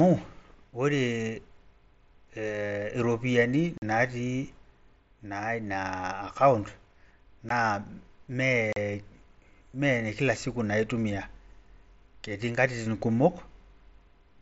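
Speech, carried over a wideband mSBC Bluetooth headset link that passes audio up to 8 kHz. It has three short holes from unconcealed Bluetooth headset packet loss. They fall at 3.78 to 3.82 s, at 7.49 s, and at 8.73 to 8.77 s. They last 45 ms, 15 ms and 37.5 ms. Packets between headset and phone went missing, and nothing filled the gap. The sound simply stops and restarts, with abrupt edges that can click. The longest hole fits about six lost packets.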